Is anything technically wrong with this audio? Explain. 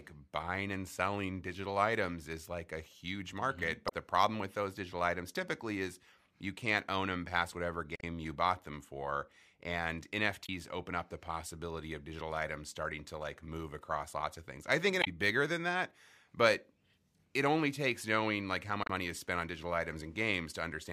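Yes: damaged data in a compressed stream, at 3.85–3.92, 7.96–8.03, 10.42–10.49, 15.00–15.08 and 18.82–18.90 s. Corrupted bytes make the decoder misread frames and lose sync until it finds the next frame header, so each spot becomes a brief chirp, squawk, click or short hole of about 65–80 ms, as before "you bought them for".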